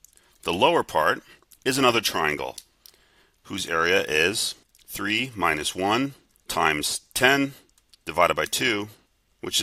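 Nothing stood out as a technical fault on listening through this audio.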